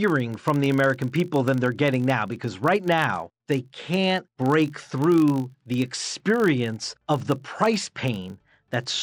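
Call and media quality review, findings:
Filter restarted on every block: low buzz at 50 Hz across the whole clip, riding on the speech. Probable component: a block-based filter stage losing its state, so each block starts from silence with a small transient. The 50 Hz rate points to 20 ms blocks. Distinguished from mains hum by level tracking: the buzz rises and falls with the speech rather than holding steady, and it is made of clicks rather than a smooth tone.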